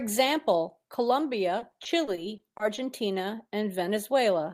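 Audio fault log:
1.59 to 2.79 s, repeated packet loss (robotic sound): across this stretch of speech the stream keeps dropping out in short bursts, eight small holes in all, none longer than about 20 ms, adding up to roughly 160 ms of missing audio. Each hole gets papered over by stretching out whatever sound came just before it, so the speech turns choppy, with little pieces of the signal smeared or simply gone.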